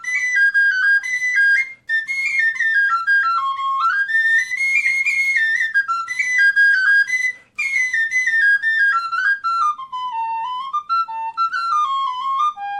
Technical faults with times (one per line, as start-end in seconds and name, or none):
none